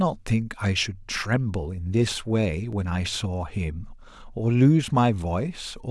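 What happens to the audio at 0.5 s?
Nothing goes wrong at 0.5 s; the speech plays through that moment intact, with no dropout, click or distortion.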